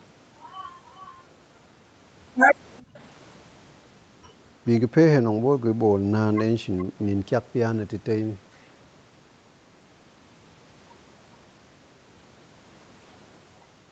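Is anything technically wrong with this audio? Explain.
Yes. The speech has two faults: a faint delayed echo and a brief dip in the room sound.

Echo leak appears from 2.78 to 2.99 s and again from 6.78 to 6.84 s. A delayed copy of the speech follows about 423 ms behind. The first is very faint, around 35 dB down. The second is louder, around 25 dB down. The likely cause is a loudspeaker on the far end whose echo canceller let some of its own playback back into the microphone.

Background gated by the echo canceller occurs from 2.82 to 2.94 s. The room sound drops by about 26 dB for roughly a tenth of a second, then returns. The canceller clamped the microphone while the loudspeaker played, and released it once the echo passed.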